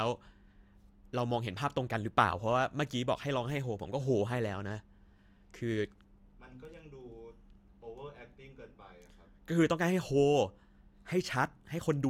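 No technical faults are audible.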